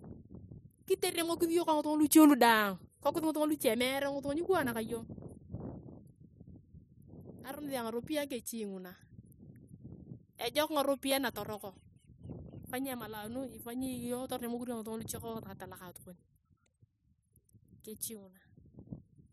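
Clock drift buffer slips recur from 3.24 s, after "lu daang kikokis", every 3.94 s: regular clicks as the buffer likely drops or repeats a small block.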